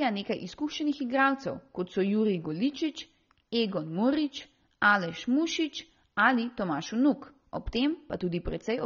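From start to end, the speech carries what is likely AAC compression at a low bitrate, around 24 kbps: nothing sounds above 6.9 kHz, and sibilants turn fizzy and warbling. A plain low-pass filter would dull the top cleanly, without that smeared, watery texture.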